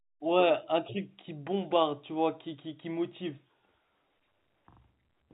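No technical faults can be heard in this speech recording. It carries the sound of G.711 telephone coding, with nothing above 4 kHz and at most a faint quantisation hiss that rises and falls with the level.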